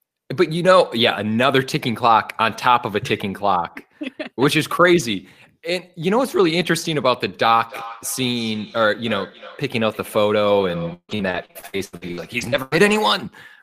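From 7.54 s to 13.31 s the speech carries feedback echo between two devices: a second device in the room replays the far end, and this microphone picks it up again. Each phrase returns roughly every third of a second, thinner and ringing, peaking about 16 dB below the speech.

Between 10.93 s and 12.96 s repeated packet loss adds choppy, robotic texture. Sixteen gaps, the longest 151 ms, are patched by extending the previous sound, so about 37 percent of that stretch is reconstructed rather than received.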